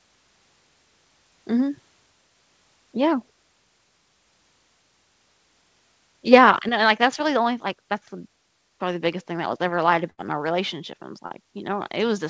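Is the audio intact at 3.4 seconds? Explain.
Yes, the speech is intact at 3.4 seconds, with no dropout, glitch or distortion at that moment, only the normal sound of a wideband call path whose content stops at about 8 kHz.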